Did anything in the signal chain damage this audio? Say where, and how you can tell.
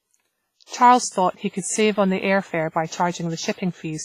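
Yes, the damage is at the codec stage. The speech carries heavy WMA compression throughout: a ringing, washy quality with hiss that swells and recedes with the voice, and nothing above 15.5 kHz. The cause is likely a transform codec at a low rate, fitting roughly 24 kbps. Its block-wide quantisation noise smears across tens of milliseconds, and weak components are dropped. On a spectrogram this shows as a hard ceiling at 15.5 kHz, patchy, holed harmonics, and a noise haze that tracks the speech level.

The same codec causes pre-echo at 0.66–0.71 s, spreading about 50 ms, and at 3.52–3.58 s, spreading about 59 ms. In each case a short hiss arrives before a sharp onset, and the attack sounds softened. This happens because noise sized for the loud part of a transform block also fills the quiet stretch leading into it. On a waveform, low-level fuzz appears just ahead of the onset. A spectrogram shows a broadband smear leaking backward in time from the attack.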